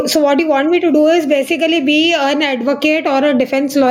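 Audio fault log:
Throughout, gain pumping: the level swings by around 10 dB, so the speech sounds squashed and breathing. The likely cause is input gain set far too high, with a fast limiter clamping each peak.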